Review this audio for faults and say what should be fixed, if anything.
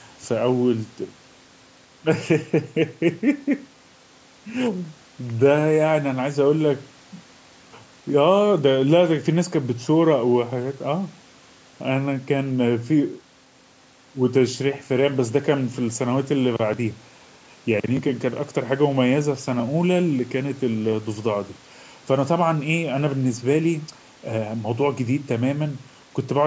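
Nothing here needs fixing, since the speech simply carries the usual character of a call's microphone processing, with the lowest bass trimmed and nothing above 8 kHz, which is just how that path behaves.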